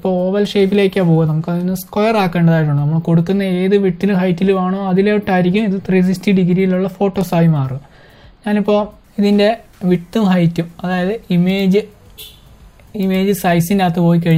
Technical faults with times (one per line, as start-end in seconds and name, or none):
none